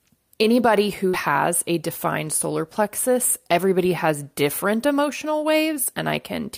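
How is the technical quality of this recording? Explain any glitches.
One glitch is audible in the speech, a short concealed packet loss at 1.09 to 1.15 s. About 40 ms of audio never reached the decoder in time, so it filled 37 ms by extending the preceding sound and then blended back, leaving a brief smear or wobble.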